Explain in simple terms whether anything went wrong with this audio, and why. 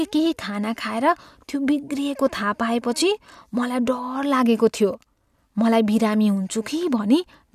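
Nothing went wrong with this audio; there is no fault to be heard anywhere in the speech.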